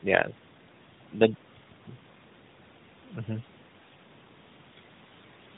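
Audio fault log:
No faults detected.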